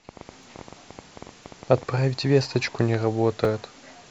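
A train of clicks runs from 0.09 to 1.9 s over this speech, about twenty irregularly spaced pops at roughly 11.7 per second and near speech level, likely from interference or a faulty connection. Overlapping chunks stutter at 0.43, 1.44, 2.45 and 3.45 s: the audio was handled in 1.0 s blocks, each starting 6.5 ms early, so that sliver replays at every join.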